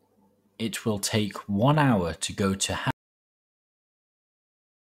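A short speech clip with an audio dropout to silence. At 2.91 s, right after "hour to go to", the sound cuts off mid-flow. Silence follows, with no room tone, until the end. The input was likely lost while recording continued.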